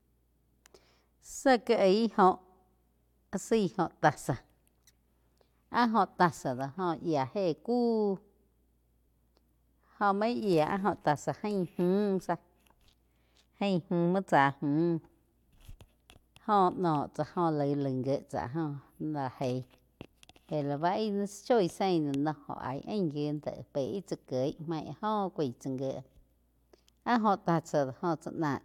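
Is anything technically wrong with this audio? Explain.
No, the speech signal shows no technical faults anywhere in the recording.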